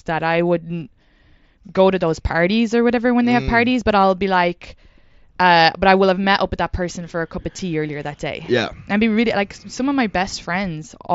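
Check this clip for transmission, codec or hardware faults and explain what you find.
Three short dropouts in this speech are concealed Bluetooth headset packet loss. The speech is carried over a wideband mSBC headset link, which limits the band to 8 kHz. The losses fall at 4.02 s, 6.49 s and 7.56 to 7.59 s, spanning about 22.5 ms, 7.5 ms and 22.5 ms. Each gap is filled by repeating the best-matching recent stretch of waveform. The single short gap is nearly inaudible. The longer two give a brief buzzy hold and a slight warble as real audio resumes.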